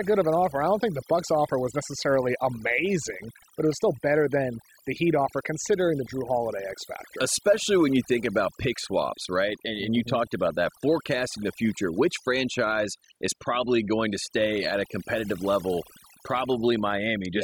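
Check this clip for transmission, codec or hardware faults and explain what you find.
What's going on here is overdone noise removal, and it runs through the whole speech clip, start to finish. A noise reduction stage was pushed too hard on a noisy source. Any frequency band it judges close to the noise floor gets pulled way down or shut off entirely, and the softer parts of the voice get caught in that too. So you hear a background that drops away and breaks up into little twinkling, warbling specks.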